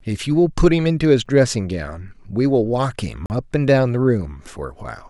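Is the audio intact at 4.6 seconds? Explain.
Yes, the speech is intact at 4.6 seconds, with no audible fault at that moment.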